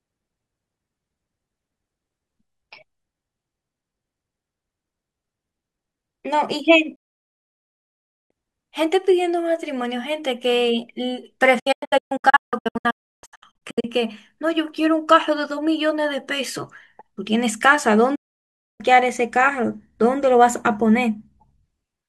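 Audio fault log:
6.95–8.31 s, 11.59–13.85 s and 18.15–18.81 s, digital broadcast dropout: the receiver stopped getting good frames and muted, so the speech snaps away with a quick fade of about 8 ms. The middle one breaks into short holes, up to 0.32 s each. Whatever was sent in the gaps is simply gone.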